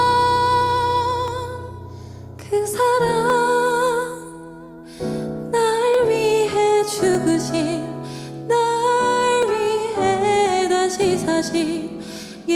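Sharp single clicks land at 1.28, 3.30, 5.94, 7.15, 9.43 and 11.02 s, each likely dropped samples: well under a millisecond goes missing, so the waveform jumps abruptly.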